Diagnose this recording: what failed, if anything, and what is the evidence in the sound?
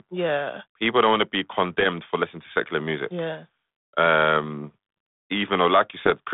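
Bit errors on an ADPCM link, at the transmission stage. Short rough pops with brief level jumps appear at 1.80–1.86 s, right after "don't want to be" and before "for listening to secular", and again at 6.01–6.11 s. Each flipped bit corrupts the G.726 decoder's step size and predictor, so the damage rings on for some milliseconds before adapting back. Packet loss would instead leave silence or smoothed concealment. The 150 Hz to 3.6 kHz telephone band fits a 32 kbit/s cordless link.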